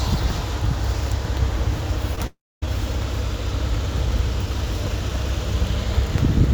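At 2.15 to 2.19 s there is a short concealed packet loss. About 20 ms of audio failed to arrive in time, and the receiver extended the preceding sound to cover the gap before blending back into the real signal, producing a brief smear.

From 2.27 to 2.64 s the sound continues briefly as a decaying buzz or hiss, then goes silent for about 260 ms before resuming with roughly 360 ms of material absent. This is likely a long network dropout, where the concealment ran out and nothing was played.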